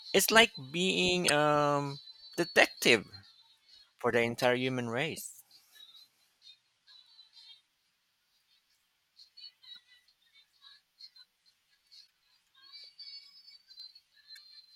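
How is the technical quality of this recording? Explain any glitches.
The speech recording is marred by two kinds of glitch: repeated bursts of damaged data in a compressed stream, and one skip.

Damaged data in a compressed stream occurs at 1.27–1.30, 4.42–4.44, 9.74–9.77, 12.04–12.07 and 14.31–14.38 s. Corrupted bytes make the decoder misread frames and hunt for the next header, producing short chirps or squawks.

At 13.80 s there is a single jump of a few milliseconds. The likely cause is a dropped buffer (overrun): unread samples were overwritten and the surrounding audio spliced together. Unlike the corrupted frames, the jump brings no squawk, just a sharp discontinuity.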